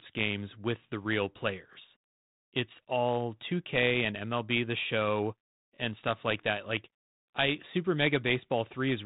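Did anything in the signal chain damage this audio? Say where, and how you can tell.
Yes. The damage is at the buffer stage, from overlapping chunks: the audio was handled in blocks about 4 s long, and each new block began about 23 ms before the previous one finished. That short overlap plays twice at each join, so the speech gives a small click-like stutter from 1.74 to 1.76 s and again from 5.76 to 5.78 s. The 4 s spacing points to chunking rather than a random dropout. The light, telephone-band colouring of the G.726 path at 32 kbit/s is not part of this fault.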